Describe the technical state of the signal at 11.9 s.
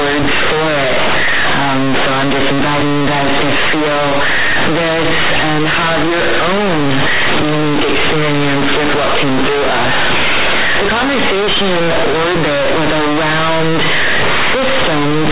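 At 11.9 s the speech is affected by companded audio read as linear, a fault present from start to finish. The mu-law bytes are played as plain 8-bit samples without expansion, so every sign change throws the output across about half its range and quiet passages come out as large as loud ones. The result is harsh, very loud buzzy distortion with heavy noise filling the pauses. Ordinary clipping or overload would leave the gaps between phrases quiet. Here the noise floor rises in those gaps, which points to a companding mismatch rather than excess level. The underlying telephone coding still passes nothing above 4 kHz.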